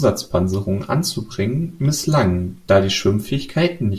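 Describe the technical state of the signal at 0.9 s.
At 0.9 s the speech signal is intact, with no audible fault at that point.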